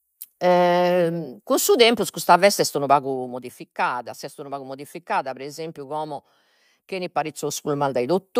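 From 2.82 to 3.58 s the speech level drops by roughly 10 dB in 1 dB steps, about ten per second, with no smoothing between them, which produces zipper noise: a faint ticking rides on the speech as it fades. From 7.08 to 7.68 s the level climbs back by about 10 dB in coarser 2 dB steps. The waveform envelope shows a staircase, and a spectrogram shows thin vertical broadband lines at each step.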